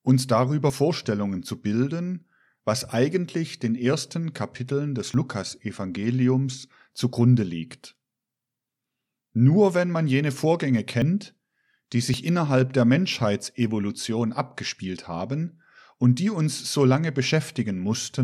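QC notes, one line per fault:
0.70 s, dropped buffer (overrun): a skip where about 40 ms of speech likely went missing, with the sound jumping ahead. The waveform shows a hard discontinuity and the spectrogram a thin vertical line.
5.14 s, dropped buffer (overrun): a shorter skip of about 20 ms, likely samples overwritten before being read. It sounds as a jump in the sound, with a waveform step and a broadband spectrogram line.
11.02 s, dropped buffer (overrun): a skip as about 20 ms likely vanishes and the two sides join directly with no silence. The waveform shows a discontinuity and the spectrogram a vertical stripe.
12.14 s, dropped buffer (overrun): just before "innerhalb der", about 20 ms is likely lost, giving a jump in the sound. It appears as a sharp waveform break and a thin full-height spectrogram line.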